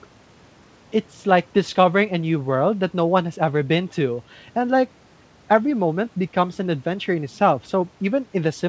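No technical faults can be heard anywhere in this speech.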